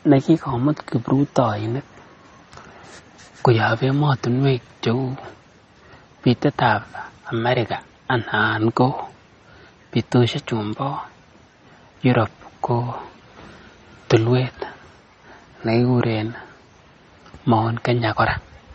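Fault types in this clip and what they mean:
MP3 compression: a bit-starved encoder, likely MP3 near 32 kbps, removes everything above 8.3 kHz and leaves plainly audible swirling, watery damage on the speech.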